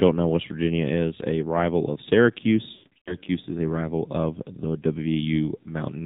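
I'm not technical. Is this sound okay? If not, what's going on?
No. The AMR narrowband mobile codec runs through the whole clip. This is the phone speech system used on older 2G and 3G mobile networks. It throws away everything above 4 kHz and rebuilds the voice from a simple model of the throat and mouth, driven by a few pulses. Here it is squeezed hard enough that the voice sounds muffled, thin and somewhat buzzy and artificial, like a call on an old mobile phone.

Lost AMR speech frames occur from about 2.74 to 3.16 s, just before "is a rival of". Radio errors spoiled small chunks of the phone signal, and the receiving phone had to guess the missing parts by repeating the last good sound more and more quietly. About a quarter of a second was lost in scattered pieces, the longest gap about 0.12 s. You hear the voice warble, smear and drop out, then return rough.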